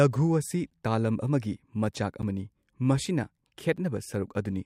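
Speech with a block of digital silence at 0.70, 2.22 and 3.77 s. Each hole lasts about 10.7 ms, which fits a 512-sample buffer left unfilled in time. It cuts to silence with hard edges and an audible tick, where a dropout concealed by a codec would fade or smear.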